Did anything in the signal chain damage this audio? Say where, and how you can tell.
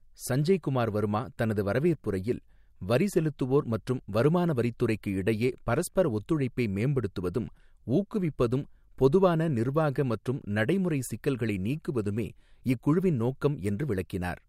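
No, nothing along the chain seems to have done any harm here; the speech just comes through the way it went in, with no stage leaving a mark you can hear.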